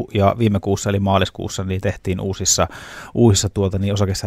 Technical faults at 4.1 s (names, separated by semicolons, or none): none